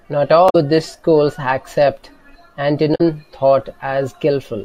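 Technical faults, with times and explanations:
0.46–0.55 s and 2.91–3.01 s: damaged data in a compressed stream. The decoder misreads corrupted frames, losing sync and searching for the next frame header. The spectrogram shows brief broadband smears with abrupt waveform discontinuities.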